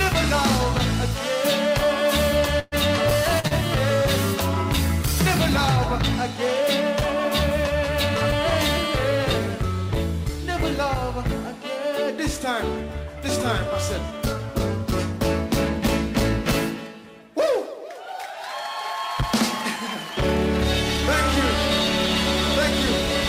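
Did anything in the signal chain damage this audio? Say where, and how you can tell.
Yes, the network stage dropped a burst of packets from 2.59 to 2.75 s, losing about 120 ms of audio. The receiver stretched the last sound across the hole and faded it, so you hear a held, dimming tail, then a jump ahead past the missing stretch.

Two short concealed packet losses follow in quick succession, at 3.40 to 3.46 s and 3.47 to 3.54 s, each about 40 ms missing. The decoder patched each gap by extrapolating the preceding sound and cross-fading back, leaving two brief smeared wobbles.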